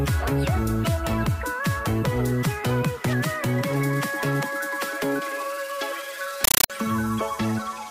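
From 6.44 to 6.70 s the sound is replaced by harsh, chattering static: a compressed stream played as audio, an AC-3 bitstream passed on as samples without decoding. Full-band noise bursts of 9.33 ms recur 31.25 times a second, separated by flat, silent zero padding.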